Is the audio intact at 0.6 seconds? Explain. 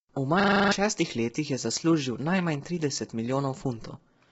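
No. At 0.6 seconds the audio sits inside a system hang loop running from 0.4 to 0.72 s, just before "šestih letih je zaslužil". The computer stalled while the sound hardware kept replaying the same 40 ms stretch of its buffer, eight times over, so about 300 ms of real speech never arrived. What you hear is a rapid stutter at 25 Hz. On a waveform it shows as identical 40 ms blocks repeating. A spectrogram shows vertical seams every 40 ms and a frozen spectral pattern.

The same moment also carries the roughness of low-delay AAC compression that runs through the whole clip. The rough, grainy texture and the hard ceiling are most likely caused by AAC-ELD coding, with damage heavy enough to point to a rate around 16 kbps. At such a low bitrate its coarse quantization leaves noise in the gaps between voice harmonics. On a spectrogram the harmonic lines look smeared, with speckled noise between them, and nothing appears above 7.7 kHz.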